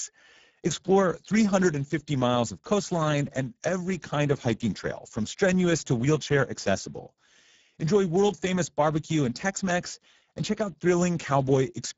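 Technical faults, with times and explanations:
Throughout, Speex codec: the speech has a rough, hoarse grain, with nothing at all above about 7.7 kHz. This is plainly audible damage from Speex coding at around 9.8 kb/s, which leaves too few bits to model the excitation faithfully.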